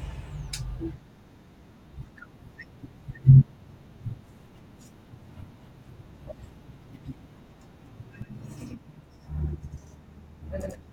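From 8.22 s to the end, the speech sounds doubled, each syllable followed by an equal-level slap echo 93 ms later. This is channel delay (doubling): one channel lags, which fits a 4096-sample buffer, and the mono sum plays both copies.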